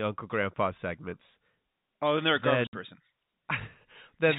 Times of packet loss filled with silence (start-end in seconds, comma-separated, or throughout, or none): 2.67-2.73